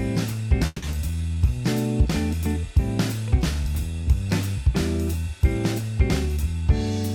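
Four network-playback faults appear in this 7-second audio. From 0.66 to 0.83 s there is a call audio freeze: the last sound is stretched into a fading buzz or hiss for about 160 ms, ending in roughly 10 ms of silence, then playback resumes exactly where it stopped. This is likely a jitter buffer running dry while packets were delayed, so no audio is lost but about 160 ms of delay is added. A skip ahead follows at 0.91–0.93 s, where around 70 ms of audio is dropped and the two sides are butted together with only a 10 ms bridge. This fits a stretch of audio being dropped in transit or by an overflowing jitter buffer while later audio was already waiting. Between 1.11 and 1.36 s a jitter buffer slow-down runs the audio at 80% speed without changing pitch. Repeated pitch periods add 61 ms and draw the sound out to rebuild the buffer's reserve. From 6.26 to 6.62 s a jitter buffer speed-up plays at 118% speed at unchanged pitch. 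Trimming short pitch-period segments removes roughly 70 ms, which sounds hurried as the receiver sheds excess buffered delay.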